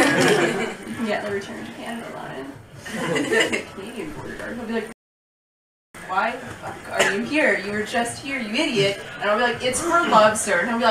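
At 4.93 s the audio drops to silence and stays there until 5.95 s, a rebuffering stall of about one second. The player ran dry of downloaded data and simply waited, then picks up exactly where it left off, so nothing's missing, just a second of dead air added.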